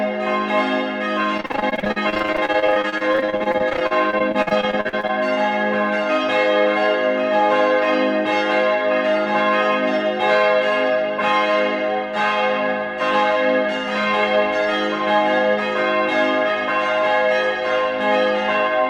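From 1.37 s to 5.1 s the sound turns choppy, with a robotic, stuttering texture and small pieces missing. This is repeated packet loss: dozens of short holes follow one another closely, the longest about 45 ms. Each hole is papered over by stretching the last received sound forward, so roughly a third of that stretch is concealment rather than real signal, which produces the mechanical character.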